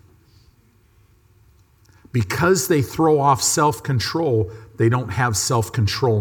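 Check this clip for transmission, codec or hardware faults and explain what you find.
No transmission, codec or hardware faults turned up here.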